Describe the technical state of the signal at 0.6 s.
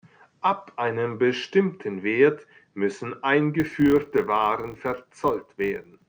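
At 0.6 s the speech signal is intact, with no audible technical fault at that moment.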